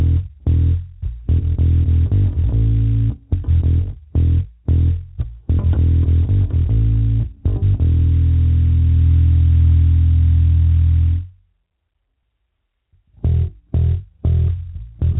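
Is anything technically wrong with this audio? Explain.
No, nothing in this audio is technically wrong. It has passed through a call path whose narrowband coding leaves nothing above 4 kHz, which fits a G.711 mu-law phone codec and gives the sound its muted, telephone-like top end.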